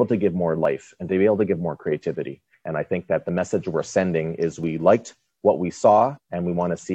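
Overlap between stream segments: the timestamps of adjacent segments, which recur about every 2 s, overlap, and the player discards the overlapping stretch, so 5 to 12 milliseconds of sound vanish and the waveform jumps. This is heard as brief clicks or tiny skips at 0.65, 2.66 and 4.64 s.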